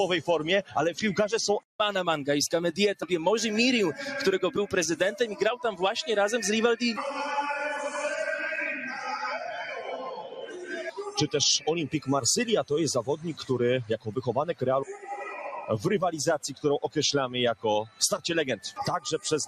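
From start to finish, a noise suppressor built for speech has been left running on this non-speech material. It treats steady, sustained parts of the sound as noise and lowers them, so the level keeps swinging by around 10 dB. Onsets pass while held portions and tails are pulled down. Unlike a compressor reacting to loudness, it responds to how steady the sound is, which is why sustained material moves while sharp attacks stay put.

Five stretches are cut harder by the noise suppressor: 9.59 to 11.12 s, the longest, dropping by about 11 dB; 13.98 to 14.22 s, by about 15 dB; 14.89 to 15.7 s, by about 10 dB; 17.86 to 18.01 s, by about 14 dB; and 18.64 to 18.8 s, by about 13 dB. The sound sinks rather than vanishing, which separates these from dropouts, and the loss falls on steady or decaying parts rather than on transients.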